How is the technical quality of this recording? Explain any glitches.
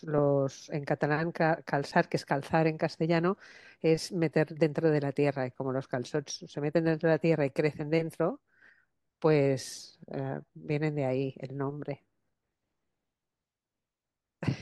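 One brief glitch occurs in the speech. At 1.92 s there is an underrun with held sample: the output buffer ran empty for 5 ms, so the converter held its last value. On a waveform this looks like a short flat line. A few milliseconds of live audio were lost during the gap.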